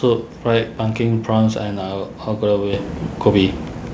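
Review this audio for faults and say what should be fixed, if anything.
At 2.73 s the speech and the background noise jump up together by about 9 dB in a single step. This is a microphone volume step-up: the call software judged the input too quiet and raised the device's input gain at once. Because the noise floor rises with the speech, the change comes from the input gain and not from a talker getting louder. A gradual automatic gain control would ease the level up over time, and a compressor would pump back down, but this is one instant step that stays. The audio came over the call path with nothing above 8 kHz, which fits G.722 at 64 kbps. To prevent it, turn off automatic adjustment of the microphone input level and set the gain correctly before the call.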